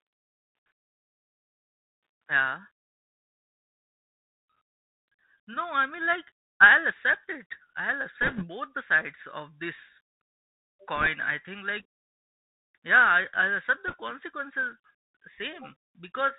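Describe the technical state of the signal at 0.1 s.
Bluetooth CVSD headset codec damage is present at 0.1 s, as it is across the whole clip: one bit per sample steps the waveform up or down, which fits a 64 kbps link. Speech is cut off above 4 kHz, loud high sounds outrun the step and distort, s sounds turn scratchy, and granular hiss sits underneath.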